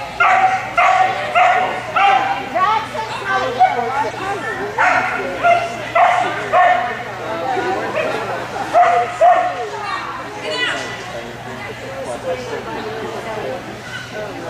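At 4.10 to 4.15 s, 10.03 s and 11.39 to 11.42 s, corrupt frame decoded: damaged frames played anyway, throwing energy into the wrong frequencies as brief chirpy blips.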